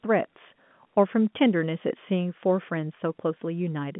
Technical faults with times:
none

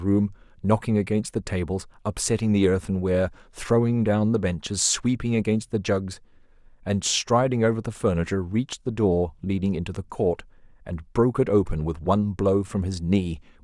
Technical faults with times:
none

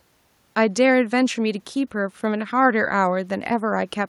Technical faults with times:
none

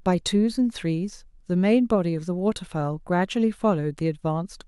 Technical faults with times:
none

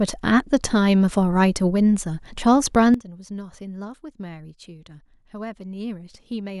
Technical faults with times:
2.94-6.60 sudden gain jump

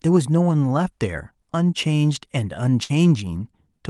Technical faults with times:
2.83-2.91 burst of packet loss

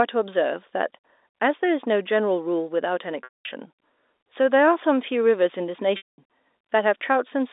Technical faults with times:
3.24-3.45 packet loss with pitch repetition
5.97-6.18 packet loss with pitch repetition

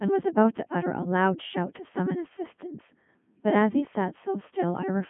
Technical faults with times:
0.00-5.09 Codec 2 vocoder

